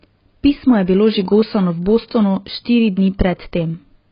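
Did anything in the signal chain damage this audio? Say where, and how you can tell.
Yes, at the codec stage: the speech is dull throughout, with nothing above 5.2 kHz. That sound fits heavy AAC compression, likely AAC-LC near 16 kbps, which discards the high band.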